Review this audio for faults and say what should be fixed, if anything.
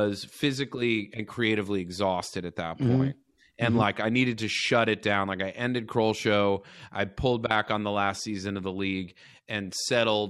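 Nothing needs fixing; no faults can be heard.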